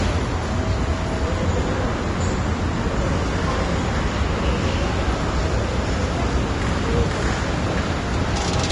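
Everyday sounds, dull throughout with nothing above 10.6 kHz. This is likely low-bitrate audio saved at a high bitrate: a heavily compressed earlier encoding whose losses a later high-rate MP3 cannot restore.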